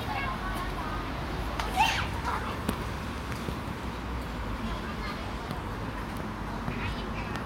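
A recording of everyday sounds, with nothing technically wrong with it.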